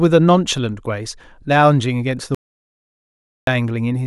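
At 2.35 s the speech cuts to dead silence until 3.47 s, about 1.1 s lost: an audio dropout to silence, likely from input briefly disconnecting.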